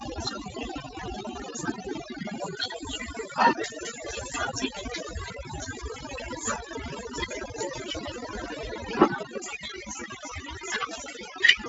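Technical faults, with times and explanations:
Throughout, overdone noise removal: a denoiser set too strong switches off bands near its noise estimate, leaving a background that drops and breaks up into twinkling specks, with quiet parts of the voice lost along with it.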